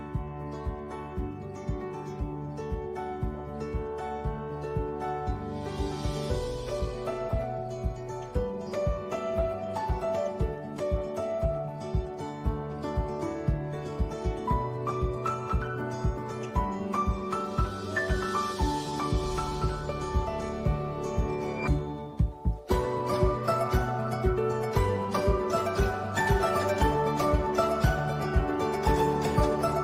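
Nothing stood out as a technical problem on listening.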